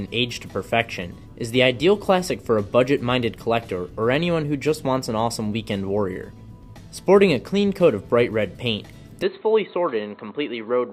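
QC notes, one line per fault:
9.23–10.92 s, input switched to a poorer device: the sound abruptly turns dull and boxy with no gap at the change, loses everything above 4.2 kHz, drops a few decibels in level, and gains a faint new noise floor well below the signal. The likely cause is the recording input changing to a narrower-band microphone or headset profile. On a spectrogram the upper band goes empty from 9.23 s onward; the waveform steps down slightly in height.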